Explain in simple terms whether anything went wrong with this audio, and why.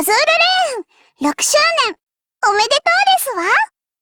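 Three short stalls from a late packet happen close together: at 1.59 to 1.64 seconds, 1.94 to 1.98 seconds, and 2.02 to 2.08 seconds. Each time, a piece of the audio arrived too late to play on schedule. The player ran out of sound to play, so it stretched the last bit for about 27, 19 and 44 milliseconds. Then it picked up exactly where it left off. Nothing is lost. The sound just hangs for a moment, with a faint buzz or dip.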